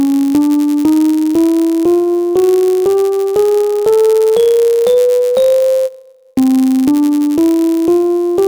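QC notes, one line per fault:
Throughout: block size mismatch (padded). One stage hands over blocks slightly shorter than the next stage reads, and the shortfall in each block is filled with zeros. These tiny silent gaps recur about 99.6 times a second, which gives a steady buzz at about 100 Hz under the sound. Because each block carries a sliver of silence, playback runs at 0.996 of normal speed, about 0.4% slow, while the timbre stays.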